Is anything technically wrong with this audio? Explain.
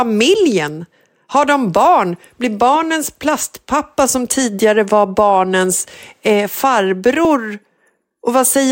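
Yes. At 7.25 s the speech jumps abruptly, as though roughly 10 ms of sound went missing and the edges were spliced together with no gap. This is likely a dropped buffer (overrun): the software fell behind, the hardware overwrote unread samples, and the audio skipped forward.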